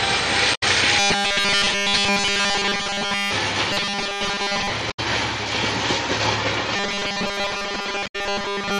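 Right at the start, from 0.51 to 0.63 s, there's a short squawk from damaged data in the compressed stream. The decoder hits bad frames, loses sync and hunts for the next valid header, so you get a garbled chirp. From 0.99 to 3.33 s the whole stretch goes robotic. It's a rigid 200 Hz metallic buzz that still loosely tracks the sound underneath. This is likely from repeated short buffers: audio isn't arriving fast enough, so playback keeps looping the last slice. A 200 Hz buzz means each repeat is 5 ms long. The same robotic buzz returns from 3.73 to 4.70 s, covering most of that stretch, again at 200 Hz. Another damaged-data blip lands at 4.87 to 4.99 s, with the same garbled chirp. The buzz comes back from 6.76 s to the end at 8.80 s, again over most of it, and a final corrupted-frame squawk cuts through it at 8.03 to 8.16 s.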